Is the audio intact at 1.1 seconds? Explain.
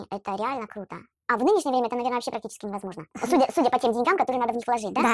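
No. At 1.1 seconds, as throughout the clip, there is a wrong sample rate fault. The speech plays 1.5 times too fast, and its pitch rises by about seven semitones. Speed and pitch shift together, which fits 16 kHz audio played back at 24 kHz without conversion.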